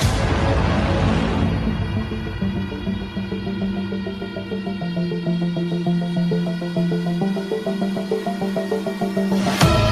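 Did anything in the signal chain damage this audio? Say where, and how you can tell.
No, nothing in the signal chain damaged this audio.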